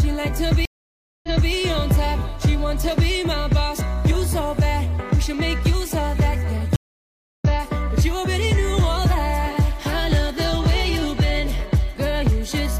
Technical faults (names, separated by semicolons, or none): stream reconnect